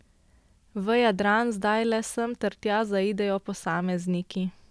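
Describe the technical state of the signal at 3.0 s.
At 3.0 s the audio is intact, with no fault audible at that moment.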